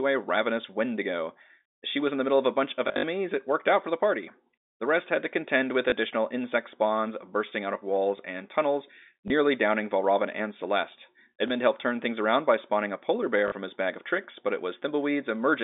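Packet loss with last packet repeated first appears at 2.88 to 3.04 s, where 120 ms of audio is lost across 160 ms, with runs of up to 60 ms. Each gap is filled by replaying the previous 20 ms block, so the runs give a short robotic stutter buzzing at 50 Hz. On a spectrogram these runs show as repeated, identical vertical slices. In the waveform they appear as copied segments with abrupt joins.

Single blips follow at 5.9 s, between "had to contend with" and "insect spawns bursting out", at 9.28 s, and at 11.48 s, just before "helped turn things around".

A 40 ms repeat at 13.48 s sits between "spawning a polar bear" and "from his bag of". Through all of these, the telephone band of the G.711 line stays within roughly 250 Hz to 3.7 kHz.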